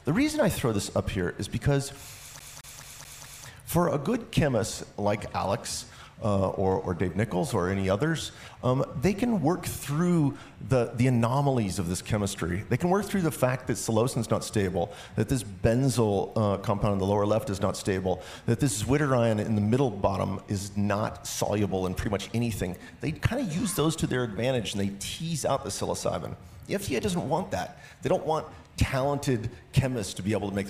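From 2.39 to 3.47 s a CD stuck on one turn replays a 216 ms loop five times, each jump a brief mute. The waveform shows identical blocks separated by short gaps.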